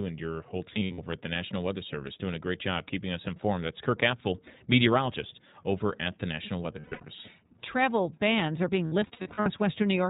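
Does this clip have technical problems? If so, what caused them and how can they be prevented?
Yes. The whole clip passed through the iLBC codec, whose rough, slightly synthetic tone points to its 15.2 kbps, 20 ms frame mode. It is a narrowband coder that discards everything above 4 kHz, so the speech sounds muffled. Carrying the call over a wideband codec would avoid this.

Lost iLBC frames: packets went missing around 0.70–1.00 s (between "and your whole" and "at the"), 6.80–7.05 s, and 8.86–9.48 s (after "bans are being"). In each gap the decoder filled in by repeating the last pitch cycle with added noise, so you hear short held, breathy vowel fragments scattered through each stretch, each a tenth of a second or less. The speech recovers cleanly right after each one. A more stable network path, a larger jitter buffer, or forward error correction would prevent these losses.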